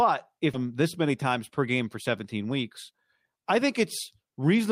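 At 0.53 to 0.55 s the speech skips ahead. About a second of audio was dropped, and both sides join directly with no gap. From 2.50 to 3.57 s there is a jitter buffer speed-up. Short pitch-period slices were cut repeatedly, trimming about a tenth of a second. Speech runs 7% faster at unchanged pitch, sounding slightly hurried.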